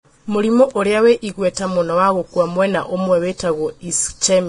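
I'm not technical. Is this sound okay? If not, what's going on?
No, it's not quite okay. All the way through, the speech sounds hissy and grainy, and the crisp top end is gone above about 10.6 kHz. That's likely heavy Vorbis compression, which squeezed the fine treble detail into rough noise to save space.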